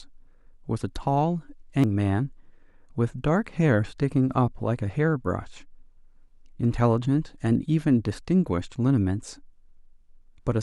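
At 1.84 s the speech is broken by damaged data in the compressed stream: corrupted bytes make the decoder misread a frame and lose sync before it finds the next header. It sounds like a brief chirp or blip, visible as a thin broadband vertical smear on the spectrogram and an abrupt waveform discontinuity.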